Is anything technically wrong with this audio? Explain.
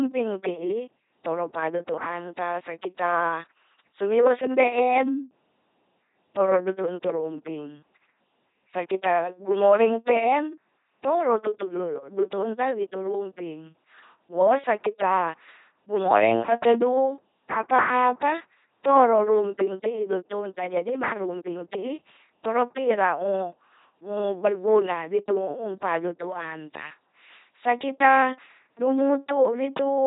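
Yes. The speech has passed through an LPC-10 vocoder, and the damage is heavy across the whole clip. The coder keeps no actual waveform. It models the vocal tract as a small all-pole filter, fed by either a pulse train or noise. Each moment is forced to be fully voiced or fully unvoiced. The result is a buzzing, robotic voice, with nothing above 3.8 kHz. This fits a 2.4 kbit/s coder.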